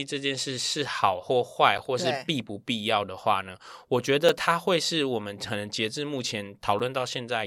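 At 1.78 s, 4.29 s and 6.79 s the speech is broken by a gap between chunks: a silence of 6.5 ms, recurring every 2.5 s. The audio was delivered in 2.5-second pieces, and each join leaves a hole, most likely from padding or a late start on the next piece. Unlike a dropout, nothing is missing, and the speech simply resumes where it stopped. The strict regular spacing also separates it from random packet loss.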